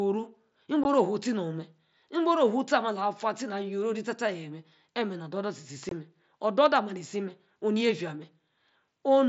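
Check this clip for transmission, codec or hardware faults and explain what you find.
Unconcealed Bluetooth headset packet loss occurs twice, at 0.84 s and from 5.89 to 5.92 s. Headset-to-phone voice packets went missing and were replaced by silence or an idle pattern rather than concealment. This leaves gaps of 15 and 22.5 ms with abrupt edges, consistent with two and three lost 7.5 ms frames, over the wideband mSBC link.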